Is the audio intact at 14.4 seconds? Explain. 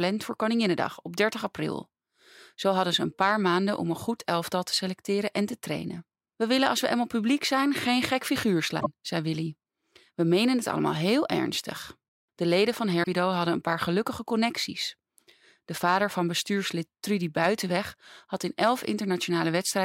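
Yes, the speech at 14.4 seconds plays through cleanly, with no dropout, glitch or other fault at that moment.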